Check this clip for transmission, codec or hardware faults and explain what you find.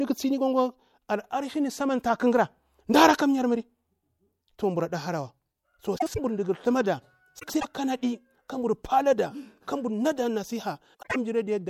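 The speech shows one transmission fault, frames out of order, at three points: 5.98–6.20 s, 7.39–7.65 s and 10.94–11.16 s. Two adjacent blocks of about 78 ms each (105 ms at 7.39 s), consistent with runs of three or four codec frames, were decoded swapped, so each stretch plays its halves reversed, a garbled flutter, without losing time.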